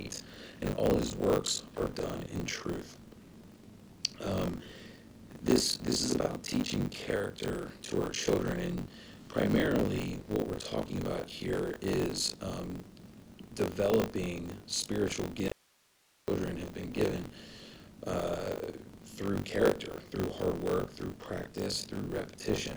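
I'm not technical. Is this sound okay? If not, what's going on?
No. Throughout there is a rough, robotic buzz at 50 times a second, called buffer tearing: the playback system and the program feeding it have slipped out of step, so roughly a third of each short chunk replays sound from about 40 ms earlier. Unlike mains hum, it disappears whenever the sound goes quiet.

From 15.48 to 16.27 s, about 0.79 s, there is an audio dropout to a faint residue. The sound cuts out abruptly and only faint hiss remains, likely from the signal being lost while the equipment stayed switched on. A natural pause or fade would not stop so suddenly.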